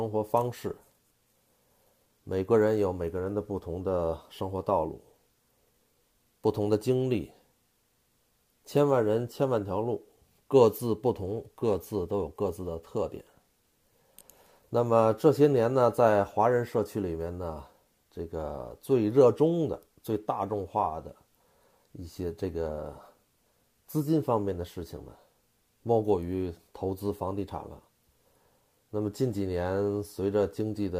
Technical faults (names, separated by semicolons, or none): sample clock jitter